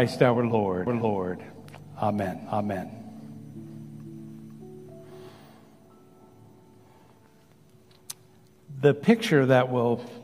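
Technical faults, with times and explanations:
0.87–5.29 s, doubled audio track: a second, slower capture path likely fed the same signal into the mix again. A dry, full-band copy trails about half a second behind at roughly equal loudness, then starts and stops abruptly.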